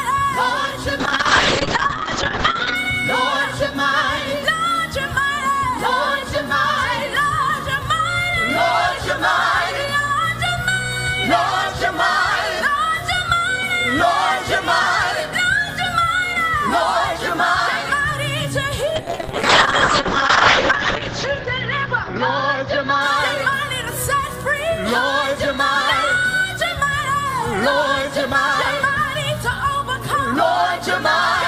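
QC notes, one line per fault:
1.01–2.81 s, call bitrate drop: the sound turns muffled and rough. The top end above 8 kHz disappears and a watery coarseness sets in for about 1.7 s at its worst. The encoder was forced to spend far fewer bits, consistent with a fall from around 48 to 7 kbps, so it narrowed its band from 20 kHz and quantised coarsely.
18.96–24.31 s, call bitrate drop: the same dull, watery roughness returns and bottoms out for about 2.0 s before clearing. The band again collapses to 8 kHz under the same reduced bit budget.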